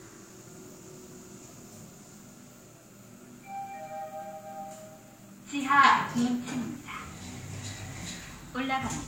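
Throughout, the overlapping smear and swirl of two codecs are heard together, with nothing above 16.6 kHz: a hard spectrogram ceiling. This is likely transcoding between lossy codecs, consistent with HE-AAC then Vorbis.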